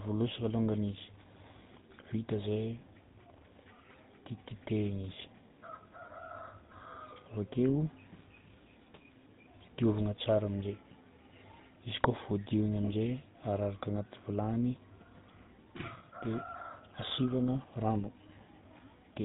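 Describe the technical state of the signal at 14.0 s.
At 14.0 s the speech sounds buzzy and gravelly, with nothing above about 3.8 kHz, as it does for the whole clip. This is GSM full-rate codec damage: the encoder models the vocal tract and rebuilds its excitation from sparse regular pulses, consistent with a 13 kbps stream.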